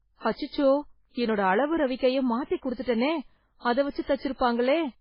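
MP3 compression, likely the cause, runs throughout the speech with heavy damage. Nothing survives above 5.3 kHz, so the treble stops at a hard ceiling and s sounds lose their hiss. The bit budget is so starved, which fits a rate near 16 kbps, that weak frequency lines are zeroed and flicker on and off between frames. The result is a watery, swirling texture with metallic chirps on sibilants and smeared consonant attacks.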